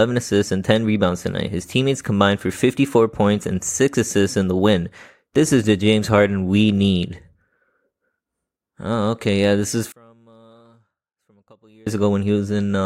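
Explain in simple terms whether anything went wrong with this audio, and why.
Something likely went wrong with the wiring or processing: one channel was inverted, so its signal was flipped upside down. From 9.92 to 11.87 s, just after "this is", the two channels cancel when combined, and the speech almost disappears into a faint trace.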